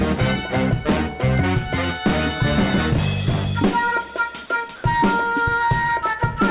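Comfort noise in place of the background appears from 4.76 to 4.84 s. For 80 ms the real background, about 22 dB below the loudest parts, is swapped for a steady, featureless hiss at nearly the same level, within about 1 dB. This is likely because discontinuous transmission paused the sender during the quiet stretch and the receiver filled the gap with synthetic noise. Through the call path the audio carries nothing above 4 kHz, which fits a narrowband telephone codec.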